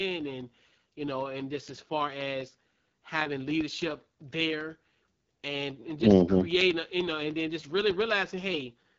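Throughout, the speech has passed through an AMR wideband (HD Voice) codec at a low rate, which fits its 8.85 kbit/s mode. Its vocal tract model is starved of bits, so the voice sounds plainly rough and raspy, and nothing is heard above about 7.4 kHz.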